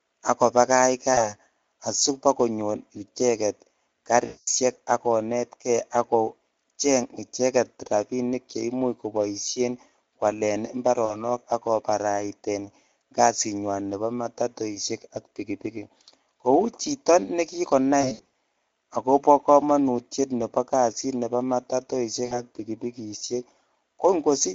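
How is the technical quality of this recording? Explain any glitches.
The recording is speech carried through a Speex codec with plainly audible coding damage, and five short packet-loss dropouts interrupt it.

Speex codec: For the full clip the voice has the noisy, hoarse texture of a CELP speech codec working with a limited bit budget, consistent with a mid setting around 16.8 kbps. Too few bits go to the excitation signal, so the sound loses its clean harmonic detail and gains a rough graininess. Any content above 4 kHz comes through only as a shaped, noise-like fill.

VoIP packet loss concealed by the speech codec: The dropouts occur at 1.13–1.34 s just before "asibakonyor icheget", 4.25–4.48 s, 11.05–11.18 s just before "ak koparait", 18.01–18.29 s just after "chito ne", and 22.25–22.41 s. The missing audio runs from 40 ms to 220 ms. At 18.01 s, 200 ms of losses are scattered over 320 ms, with the longest gap 60 ms. 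In each gap the decoder repeats its last pitch and filter at falling gain, so the sound smears into a buzzy tone or coloured noise that fades out. The decoder then takes a moment to recover, so the voice stays weak or distorted briefly after each gap.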